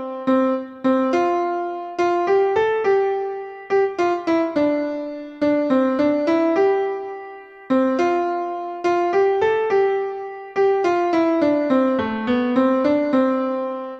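Nothing in the recording stood out as a technical problem on listening.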